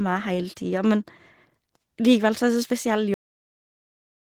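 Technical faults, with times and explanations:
Throughout: Opus voice compression. Hybrid coding splits the band, with linear prediction below 8 kHz and a transform layer above, and content reaches about 20.2 kHz. The coarse excitation leaves the speech audibly hoarse and slightly robotic, which fits a bitrate near 16 kbps.
3.14 s: cut-off end. The speech stops mid-sound and drops straight to digital silence, with no decay, for the remaining 1.2 s. The final buffers were never written, so the waveform is simply truncated rather than faded out.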